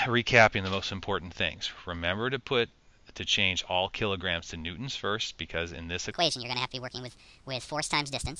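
Wrong sample rate from 6.11 s to the end at 8.40 s: the sound runs 1.5 times fast and about 7 semitones high, which fits 16 kHz audio played back at 24 kHz.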